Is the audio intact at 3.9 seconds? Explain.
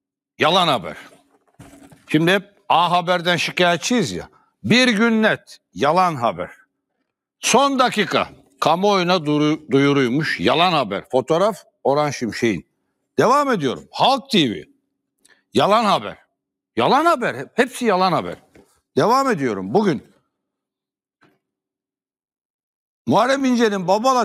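Yes, the audio at 3.9 seconds is intact, with no dropout, click, distortion or other fault at that point.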